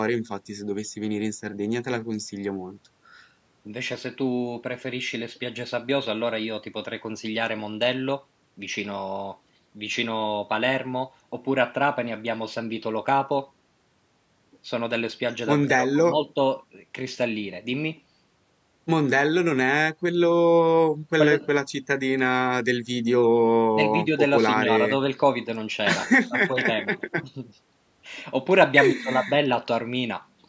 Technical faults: none

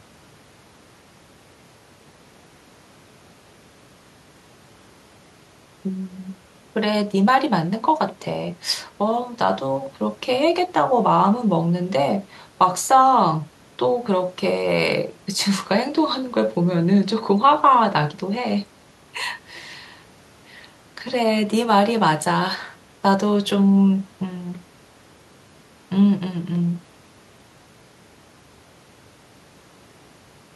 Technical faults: none

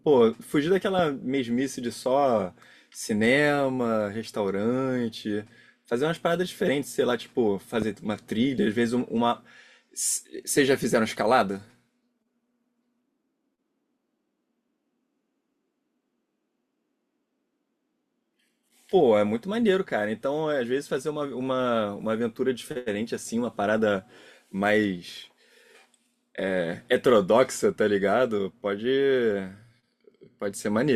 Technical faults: loud pop

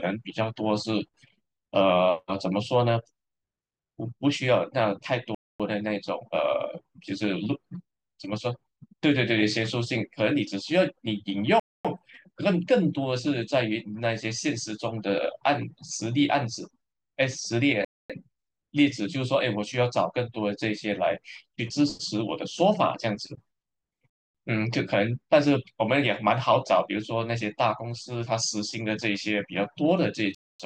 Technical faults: gap between chunks

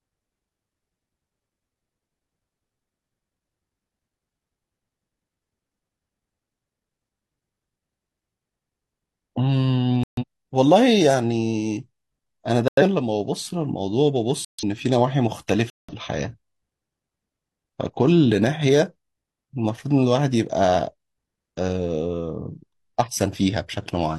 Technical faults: corrupt frame muted

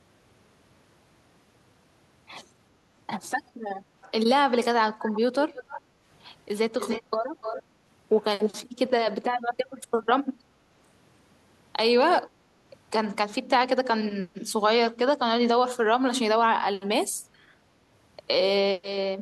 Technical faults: echo leak; background gated by the echo canceller

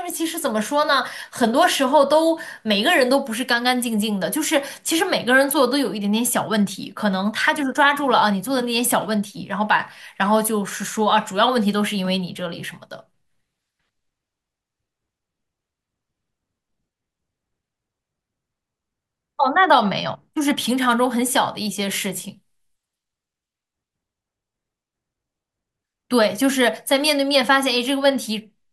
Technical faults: none

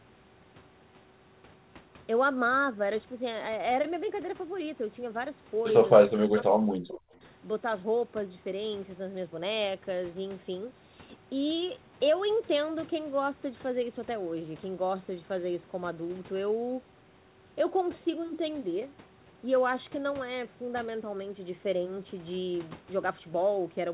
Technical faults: speech suppressed in double talk

